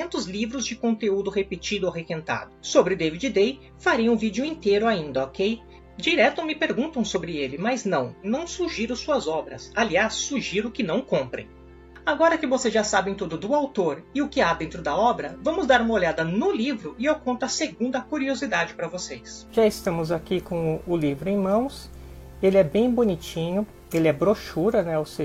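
There are no technical faults to describe in time order.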